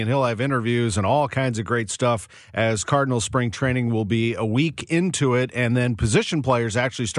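No technical faults can be heard anywhere in the recording. There is nothing in the speech audio that needs a time stamp or an explanation.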